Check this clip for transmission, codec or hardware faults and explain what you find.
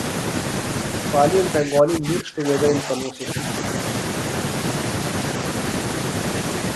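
One fault is present: speech suppressed in double talk, between 1.60 and 3.39 s. Across that stretch the speech level dips, with around one and a half seconds affected and the deepest drops reaching roughly 20 dB. The likely cause is an echo canceller that, with both ends talking at once, could not tell the near talker apart from loudspeaker echo and attenuated everything, leaving the speech turned down.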